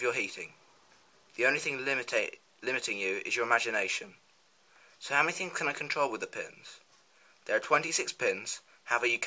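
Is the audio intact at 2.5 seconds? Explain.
Yes, the audio is intact at 2.5 seconds, with no dropout, click, distortion or other fault audible at that point.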